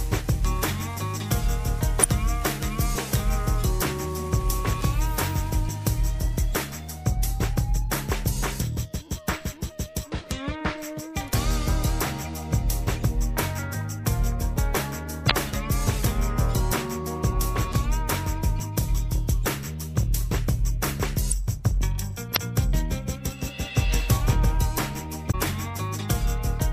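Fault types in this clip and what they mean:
Damaged data in a compressed stream: stretches of the encoded data arrive wrong, so the decoder misreads those frames and loses its place until it finds the next valid header. Here that gives five short blips of about 45 ms each, at 2.00, 15.27, 21.28, 22.32 and 25.30 s. On a spectrogram each shows as a narrow vertical smear breaking the surrounding pattern; in the waveform, as a brief discontinuity.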